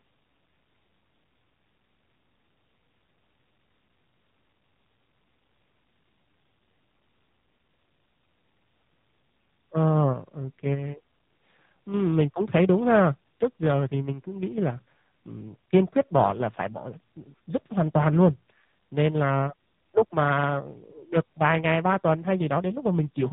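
From start to finish the speech carries the signature of the AMR narrowband mobile codec. Everything above about 3.8 kHz is gone, so sibilants lose their edge and the sound is boxed into a telephone band. The coder rebuilds each 20 ms frame from a vocal-tract filter excited by a handful of pulses, and the damage is plainly audible: a buzzy, synthetic texture that fits a 7.4 kbps AMR-NB mode.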